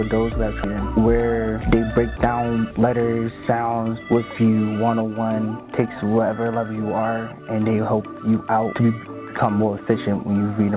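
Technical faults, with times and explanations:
0.64 s, skip ahead: the audio jumps forward with no gap, and roughly 0.4 s of sound just isn't there. Later audio was already queued, so a stretch got thrown away, either lost in transit or dropped when the jitter buffer overflowed, and playback cut straight across to what came next. Because nothing fills the hole, the two sides butt right up against each other and you get an abrupt splice rather than a silence.
1.6 to 2.58 s, jitter buffer speed-up: for about a second the sound runs about 7% fast while keeping its pitch, so it comes across a bit rushed. The buffer had built up more audio than it wanted, so the receiver trimmed tiny slices, one or a few pitch periods at a time, over and over to pull the delay back down. Roughly 70 ms gets shaved off in total, which is why it feels hurried rather than chopped. Through all of this the narrowband call codec leaves nothing above 4 kHz.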